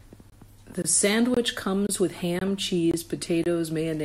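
The speech drops out for about 23 ms at 0.30–0.32, 0.82–0.84, 1.34–1.37, 1.87–1.89, 2.39–2.41, 2.91–2.94 and 3.44–3.46 s, giving a steady stutter roughly every half second. These are gaps between chunks. The audio arrived in 0.5 s chunks, and silence was inserted at each join. Nothing is missing from the speech, but its flow is broken at every boundary.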